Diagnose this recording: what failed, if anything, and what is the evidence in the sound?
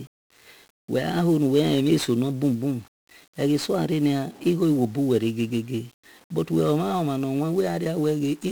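1-bit DFPWM compression across the whole speech clip, a codec-stage failure: strong broadband fuzz and crackle sit on every syllable, with the treble buried under hiss. Each sample carries one bit nudging an adaptive level up or down, which fits a 48 kbps stream.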